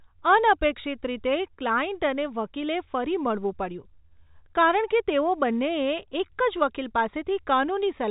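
No technical faults can be heard in the speech, which carries the narrow band of G.711 telephone coding, with nothing above about 3.8 kHz.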